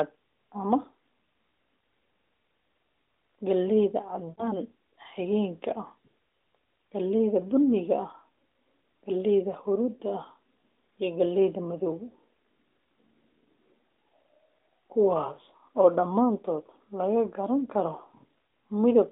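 At 4.30 s, radio errors corrupted a short run of AMR speech frames. The narrowband decoder, running at 12.2 kbps with its usual 300 to 3700 Hz telephone band, bridged the gap by reusing the last good pitch and vocal tract settings at falling gain. About 80 ms of audio is missing, which fits four lost 20 ms frames. The speech smears into a drawn-out, fading sound, then returns briefly weak or rough until about 4.56 s.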